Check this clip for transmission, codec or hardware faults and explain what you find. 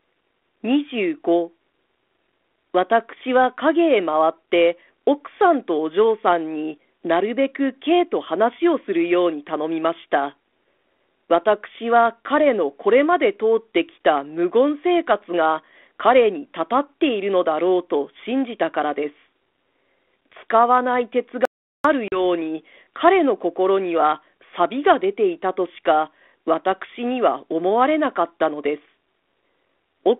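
Two faults stand out in this speech clip, both close together. They sit on a G.726 ADPCM line at 32 kbit/s, which limits the band to roughly 300 Hz to 3.5 kHz and adds light codec grain.

From 21.45 to 21.84 s there is an audio dropout to silence, lasting about 0.39 s. The speech cuts off mid-flow and the gap holds no room tone. The input was likely lost for a moment while recording continued. Whatever was said there is gone.

From 22.08 to 22.20 s comes packet loss on the ADPCM call. About 40 ms is missing, which fits roughly two lost packets replaced by silence. The hole has hard edges. The decoder's predictor and step size then lag the sender's, so the speech returns distorted until they realign.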